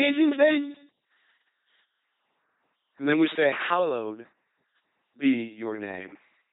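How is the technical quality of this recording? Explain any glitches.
Technical quality is poor, with heavy coding damage throughout. An LPC-10 vocoder artefact runs the whole clip: a ten-pole filter fed by buzz or noise gives a mechanical robotic sound with nothing above 3.8 kHz, which fits 2.4 kbit/s coding.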